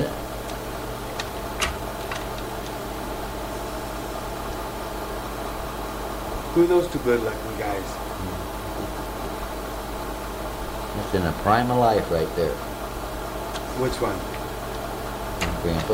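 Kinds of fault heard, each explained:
Low bit depth with dither: The audio carries a constant, even hiss from start to end. It sits roughly 20 dB below the signal. There is no harsh distortion. This fits rounding to about 7 bits with dither, which turns the rounding error into steady white noise.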